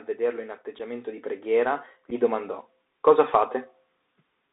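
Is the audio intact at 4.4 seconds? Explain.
No. The Bluetooth CVSD headset codec affects the whole clip, including 4.4 s. CVSD encodes each sample as a single up-or-down bit with an adaptive step size, which fits a 64 kbps headset link. The speech is confined to roughly 300 Hz to 3.7 kHz, so it sounds thin and muffled. Where loud high-frequency energy changes faster than the step can follow, it distorts, s sounds turn scratchy, and a granular hiss runs beneath the speech.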